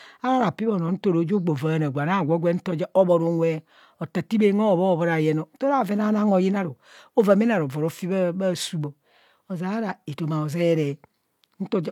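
No technical faults are audible anywhere in the speech recording.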